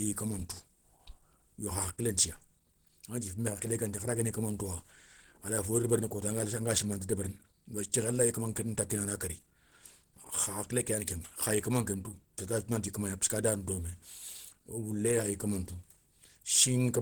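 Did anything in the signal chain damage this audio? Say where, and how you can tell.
Yes. The damage sits at the codec stage and runs through the whole clip. The speech sounds hoarse and grainy, with a rough, noisy texture over the voiced sounds. The band itself is not narrowed, and content still reaches about 20.1 kHz. The likely cause is Opus compression in its hybrid mode, which codes the lower band as speech and fills the upper bands coarsely. The plainly audible coarseness fits a low bitrate near 16 kbps.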